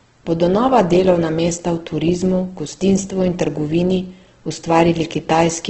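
Heavy low-bitrate Opus compression is the likely cause of what runs through this whole speech clip. The encoder seems to be working in its CELT music mode with the bandwidth cut to wideband, and the damage fits a rate of around 12 kbps. Nothing is left above about 8.1 kHz, so the top end sounds dull. With too few bits, bands are filled in rather than left empty, which makes the speech sound noisy, rough and grainy instead of swirly.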